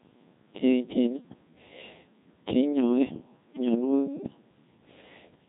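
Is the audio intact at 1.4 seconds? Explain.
No. At 1.4 seconds the speech has passed through a Codec 2 vocoder, and it does so for the whole clip. Only pitch, voicing, energy and a coarse spectral envelope survive, at a rate that points to about 1.6 kbit/s. The decoder rebuilds the voice from sine waves, so the damage is heavy and the speech sounds robotic and buzzy.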